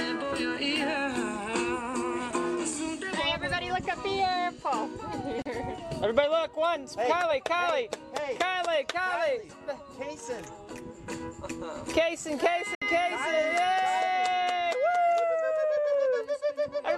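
At 5.42 s the audio cuts to silence for about 32 ms, and at 12.75 s a longer hole of about 64 ms follows. Both are digital broadcast dropouts: the receiver muted when frames went bad and resumed later, so that stretch of the programme is gone. The gaps fit one and two lost frames. Each edge has a 3 ms fade. On a waveform these are flat-line gaps, and on a spectrogram they are clean vertical bands of emptiness.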